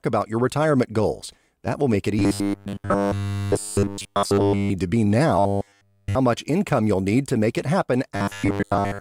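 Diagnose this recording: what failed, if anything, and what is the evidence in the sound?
Robotic sound from repeated short buffers appears at 2.19–4.7 s, 5.39–6.15 s and 8.16 s to the end. The speech hardens into a metallic buzz at 100 Hz, which fits a 10 ms chunk looped in place of fresh audio. The likely cause is the driver or buffer stage being starved. Repetition is near-total in the first two spans and partial in the last. A spectrogram shows a rigid comb of harmonics at multiples of 100 Hz, and the waveform shows identical 10 ms cycles.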